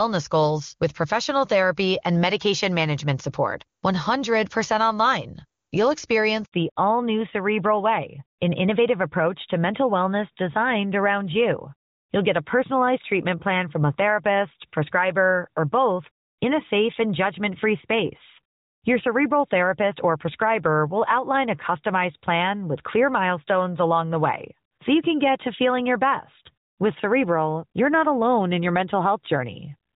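At 6.44 s the audio cuts out in a handover gap lasting 80 ms, ending at 6.52 s. As the call moves from one network link to another, no speech frames arrive during the switch, so the signal decays to silence within a few tens of milliseconds. It stays dead until the new link delivers audio. Whatever was said inside that window is gone, and the effect is a short, clean hole.

From 6.52 s to the end, a fallback to narrowband takes hold. Up to the gap, the speech is full and clear, with faint or no codec damage, which fits AMR-WB HD Voice running at its top rate, near 23.85 kbit/s. After the switch, nothing above 4 kHz remains. The voice turns dull and muffled, and sibilants lose their edge. This points to an AMR-NB link at about 12.2 kbit/s.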